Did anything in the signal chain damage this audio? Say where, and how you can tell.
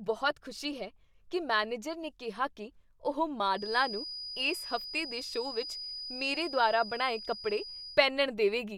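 Yes. A feedback whistle sits under the speech from 3.51 to 8.06 s. It is a thin, steady 4.9 kHz tone, about 10 dB below the speech, swelling and fading slowly. The likely cause is a loudspeaker-to-microphone loop held just at feedback. It sings but never runs away.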